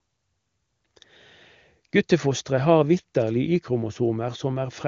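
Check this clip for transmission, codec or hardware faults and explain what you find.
No transmission, codec or hardware faults can be heard in this speech clip. It carries the sound of an AMR wideband (HD Voice) link, with nothing above about 7.2 kHz and any coding damage faint at most, which fits the codec's top rate of around 23.85 kbit/s.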